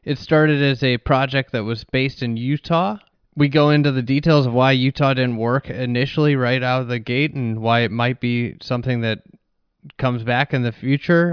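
Speech recording, no technical faults heard anywhere in it.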